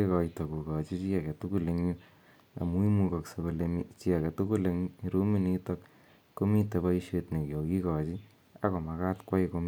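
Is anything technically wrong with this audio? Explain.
No, nothing stood out as technically wrong on listening to this speech recording.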